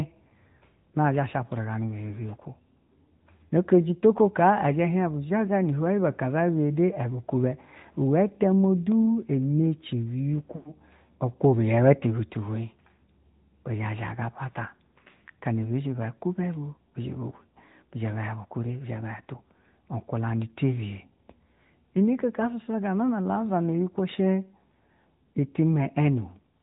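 From start to end the speech carries the AMR narrowband mobile codec. The signal has been reduced to an 8 kHz sampling rate, so nothing above 4 kHz survives and the sound is boxed in and thin. At the bit budget heard here, which fits a mode around 10.2 kbps, the vocal-tract model and sparse pulse excitation leave the voice plainly buzzy and synthetic.

Between 10.56 and 10.74 s there are lost AMR speech frames. About 100 ms of coded speech failed to arrive intact, which fits a run of five 20 ms frames. The decoder fills the gap by repeating the last good pitch and spectral settings at decreasing gain, so the sound stretches into a flat, droning tail that fades toward silence before the voice returns briefly weak or rough.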